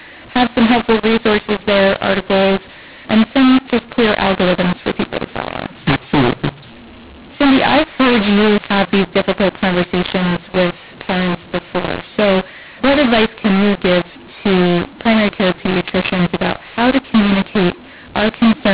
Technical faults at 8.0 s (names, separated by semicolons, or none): mu-law and A-law mixed up